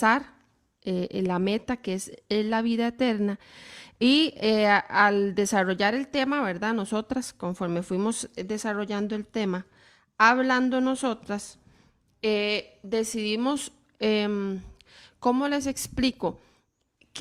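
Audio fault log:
No technical faults are audible in the speech signal.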